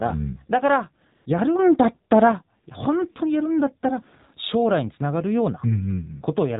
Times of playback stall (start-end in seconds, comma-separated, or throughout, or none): none